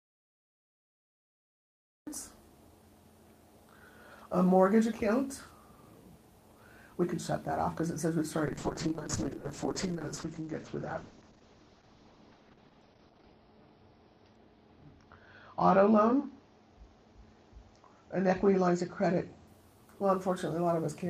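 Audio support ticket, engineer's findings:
Audio dropout to silence, 0.00–2.07 s, already under way when the clip begins. Silence, no room tone, unlike a gate or low-level fade. Sound enters abruptly at 2.07 s. Likely cause: input lost (device disconnect, link failure or mute) while the recorder kept writing silence. Content during the gap unrecoverable.

Call bitrate drop, 8.46–19.53 s. Encoder rate falls from 32 to 8 kbps after a reduced bandwidth estimate. Opus codes coarsely, audio turns rough and watery, and the top end collapses from 20 kHz to 6 kHz, giving a muffled sound. Worst stretch lasts about 4.9 s. Distinct from packet loss: continuous degradation, no gaps or glitches, full return once the rate recovers.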